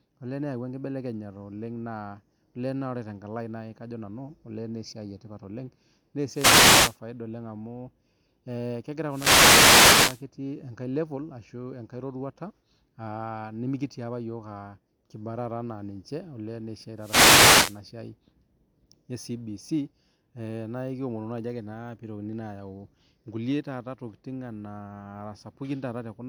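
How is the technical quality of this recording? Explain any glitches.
The recording has three wireless microphone noise hits, at 6.31–6.98 s, 9.07–10.25 s and 16.97–17.81 s. In each, the analogue FM radio link fades as reflected signal paths cancel the direct one at the receiver. Receiver noise then rises. The result is a short swish or burst of static lasting roughly 0.7 s, 1.2 s and 0.8 s respectively.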